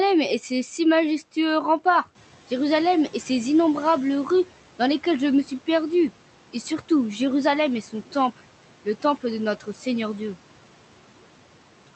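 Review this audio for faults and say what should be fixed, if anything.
Right after "le temple de", between 9.6 and 9.86 s, the noise suppressor cut into the speech, mistaking a quiet stretch for room noise and pulling it down by about 10 dB. Roughly a tenth of a second ends up sounding swallowed. Backing off the suppressor's strength or tuning it to track speech more closely would keep it from clipping soft syllables like this.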